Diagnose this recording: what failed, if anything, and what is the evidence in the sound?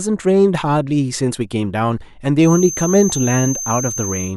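A loudspeaker-to-microphone loop, likely held just at feedback threshold, produces a feedback whistle: a thin 6.3 kHz tone from 2.37 s, roughly 10 dB under the speech.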